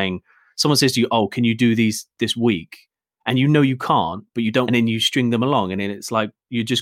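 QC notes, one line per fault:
4.67 s, stream segment skipped: this is likely a segment of the stream that never arrived or failed to load, so the player moved straight on to the next one. The speech jumps ahead at this point, with a brief blip where the two pieces meet. What came between them is gone and the phrasing breaks off abruptly, as if a stretch of the recording had been cut out.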